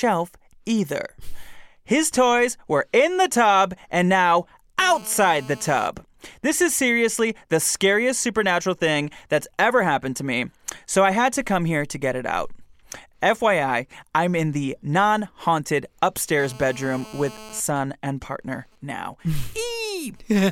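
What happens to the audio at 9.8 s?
Nothing goes wrong at 9.8 s; the speech plays through that moment intact, with no dropout, glitch or distortion.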